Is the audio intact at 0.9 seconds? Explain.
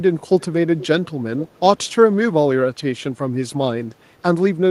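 Yes, though only just. From 0.78 to 0.87 s there is an echo leak, likely from a far-end echo canceller failing to remove what its microphone picked up from the loudspeaker. A faint copy of the speech, about half a second late and roughly 15 dB down, sounds briefly, ending just before 0.9 s.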